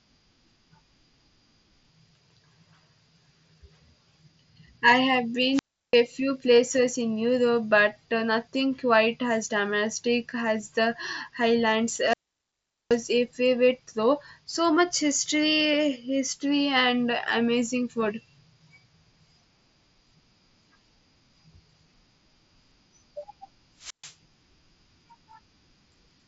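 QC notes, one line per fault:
5.51–5.99 s, 12.01–13.01 s, 23.78–24.15 s: wireless microphone squelch dropout. Each time the radio link fades, hiss rises briefly. The receiver's squelch then mutes the output to near silence for 0.34 s (between "I have" and "few places in"), 0.78 s (ending just before "a favorite though") and 0.13 s, before the signal returns. A waveform shows flat gaps. A spectrogram shows a short broadband noise smear up to the band-limited top near 7.7 kHz, then an empty column.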